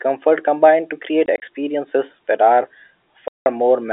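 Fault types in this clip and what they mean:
Packet loss filled with silence: at 1.26 to 1.42 s, just after "combined to create", and at 3.28 to 3.46 s, after "that are", the sound drops to dead silence where packets went missing and nothing was substituted. The first stretch holds about 60 ms of gaps scattered over 160 ms, none longer than 20 ms, which suggests 20 ms packets. The second is a solid 180 ms hole. Each gap starts and stops abruptly, so the edges are hard against the narrow telephone-band sound around them.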